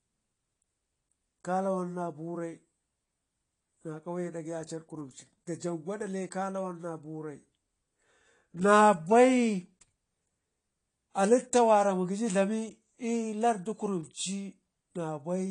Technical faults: AAC compression

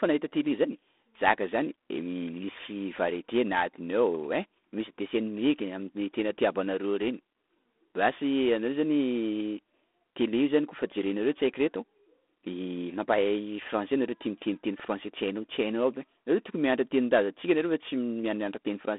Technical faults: G.726 ADPCM

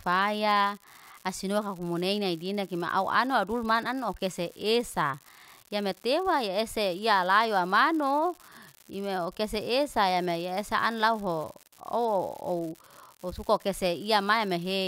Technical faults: unreliable data bit

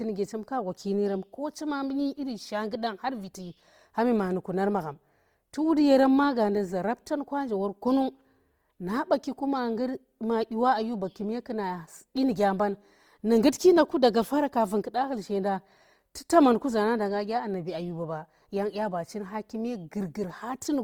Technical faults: Opus compression

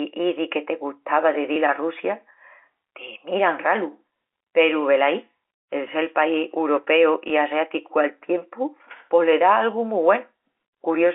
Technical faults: packet loss with last packet repeated

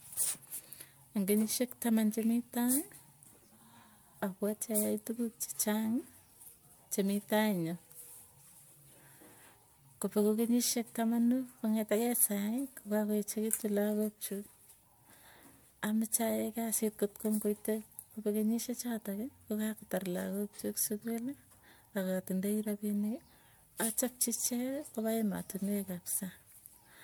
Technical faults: generation loss

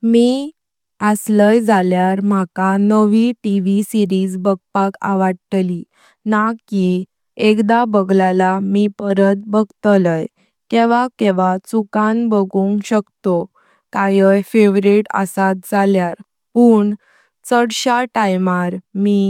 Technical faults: none

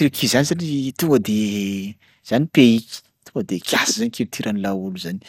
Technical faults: MP2 compression

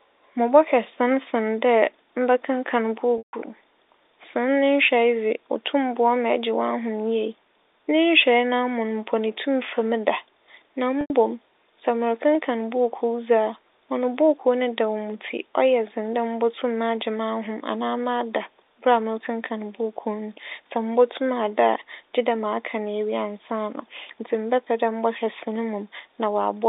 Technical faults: packet loss with pitch repetition

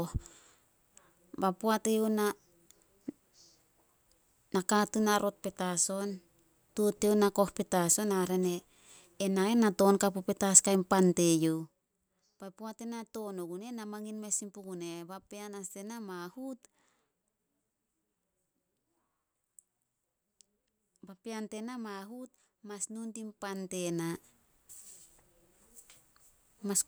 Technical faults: none

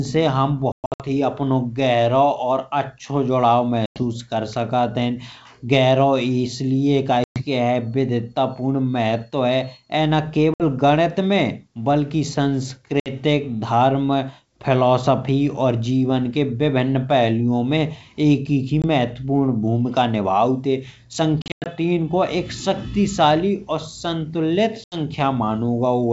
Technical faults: packet loss on an ADPCM call

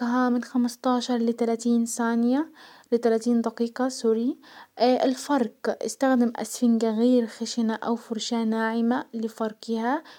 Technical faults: none

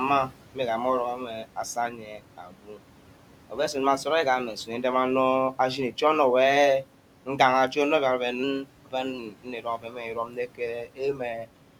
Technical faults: noise suppressor artifacts; speech cut by the noise suppressor; drift correction step

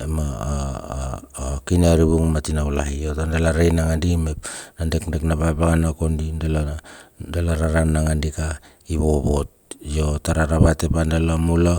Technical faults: none

